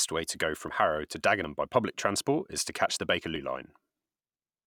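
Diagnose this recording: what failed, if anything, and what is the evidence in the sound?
Likely a dropped buffer (overrun) at the driver or buffer stage. There are small jumps at 0.68 s after "way to go", 1.44 s before "by public transport is", and 3.36 s after "transport is to catch". Each time, roughly 40 ms of unread samples was overwritten and the remaining sides were spliced together. The waveform shows abrupt discontinuities, and the spectrogram shows thin vertical broadband lines.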